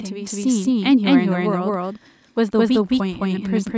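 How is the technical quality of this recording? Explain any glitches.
The recording has one fault that runs through the whole clip: a doubled audio track. A second path likely captured the same speech again and mixed it back in late, so a full-band copy trails the original by about 200 ms at roughly the same loudness. Every syllable is followed by a dry, undecayed repeat with no room colour, which gives a stuttering echo. The call's microphone processing, which stops everything above 8 kHz, doesn't cause this.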